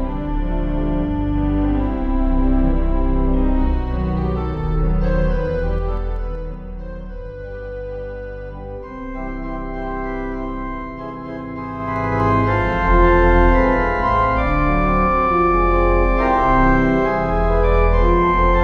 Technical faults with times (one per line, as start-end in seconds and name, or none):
5.50-6.66 zipper noise
11.76-12.25 zipper noise